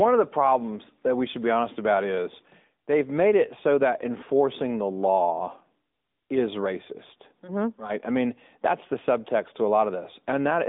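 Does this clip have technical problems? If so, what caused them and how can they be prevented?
Yes. The speech runs through an AMR narrowband mobile codec for the whole clip. Nothing above 3.8 kHz survives, and the usable band sits between about 200 Hz and 3.7 kHz. That gives the thin, boxed-in phone sound. The codec rebuilds the voice from a vocal-tract model fed by sparse pulses. At this level the damage is plainly audible, with a buzzy, synthetic edge that fits a mid-rate mode near 10 kbps. To prevent it, record or route the call over a wideband path, or capture the audio locally instead of through the mobile network.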